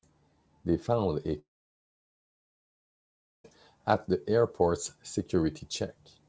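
Pre-emphasis left on from 1.09 s to the end of this speech recording: the treble was lifted along a curve matching the 50 µs FM emphasis, but the complementary de-emphasis was never applied, so the curve lifts 10 kHz about 11 dB above 1 kHz in level. From that point the sound turns thin, bright and sibilant. Because the G.722 call path passes nothing above 8 kHz, the exaggerated top stops at that cutoff. A long network dropout runs from 1.39 s to 3.45 s, likely caused by audio packets failing to arrive for roughly two seconds. The receiver briefly stretches the last sound into a fading continuation, then leaves about 2 s of silence before the sound resumes, with the lost portion simply gone.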